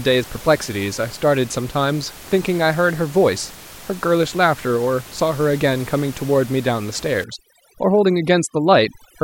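From 7.24 s to 9.23 s the speech shows overdone noise removal. A noise reducer set far too aggressively shuts off any frequency band it judges close to the noise, so the room noise, which sits about 20 dB below the speech, collapses into near silence sprinkled with twinkling artefacts, and the softer parts of the voice are cut too. On a spectrogram the gaps turn almost empty apart from isolated bright specks, and the speech harmonics look patchy with missing faint detail. On the waveform the floor between syllables drops to nearly flat.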